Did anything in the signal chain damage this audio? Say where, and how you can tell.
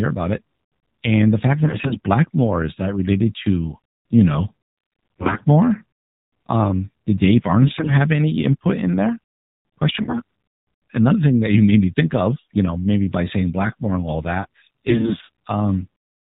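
Yes, at the codec stage: AMR narrowband mobile coding throughout. Nothing above 4 kHz survives. The speech sounds buzzy and synthetic, which fits a low AMR-NB mode around 7.4 kbps.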